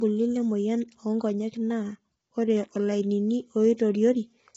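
Throughout, the speech sounds rough and grainy, with a lowered or synthetic top band. Heavy low-delay AAC compression is likely, its short frames smearing harmonics at a low bitrate.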